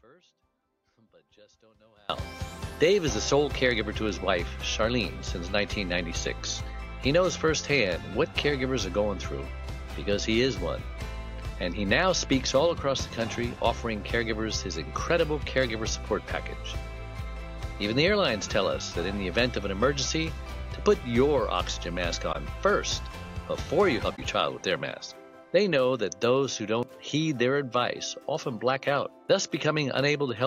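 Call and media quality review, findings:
Audio dropout to a faint residue, 0 to 2.1 s, already under way at start. Only faint sound, about 30 dB down, remains. Likely an upstream capture or link break, path still live.

Corrupt frame concealed at 22.32 to 22.36 s and 24.16 to 24.19 s. The decoder masks damaged AAC frames; the first gap's length fits two frames, the second one.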